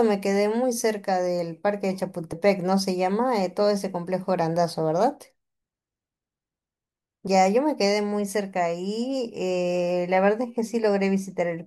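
At 2.32 s and again at 7.27 s the speech skips forward, with roughly 50 ms of sound gone and the two sides butted together with no gap of silence. The five-second spacing points to audio missing between chunks, likely a recorder handling the sound in 5-second blocks and losing a sliver at each handover. Unlike a dropout, nothing goes quiet; the sound simply jumps, and it does so on a fixed schedule rather than at random.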